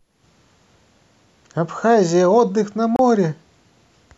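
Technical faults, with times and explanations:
2.96–2.99 s, gap at a join of encoded pieces: a 30 ms gap with smeared edges cuts the speech, left by untrimmed encoder delay and end-frame padding where separately encoded segments meet.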